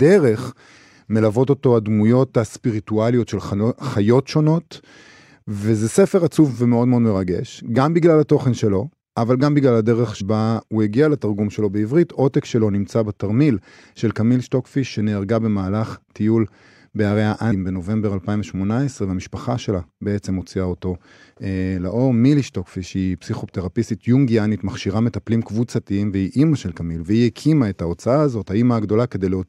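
At 0.77, 10.2 and 17.51 s, compressed frames are skipped: roughly 100, 100 and 150 ms of speech vanish. The waveform jumps abruptly.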